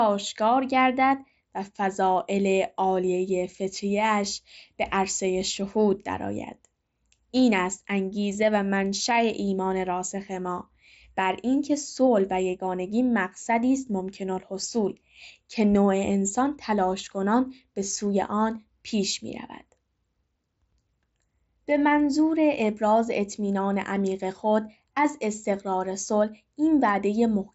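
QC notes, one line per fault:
Nothing stood out on listening to this speech, which comes through a Bluetooth mSBC headset link with its usual top end near 7.7 kHz.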